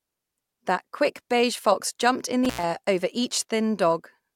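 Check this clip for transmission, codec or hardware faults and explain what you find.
Intermittent contact at 2.45 to 2.64 s, just after "beige fox jumped in": a loose plug or cable connection briefly breaks, so the speech drops out for about 89 ms, framed by crackle as the contact scrapes open and closed, with faint hiss during the gap.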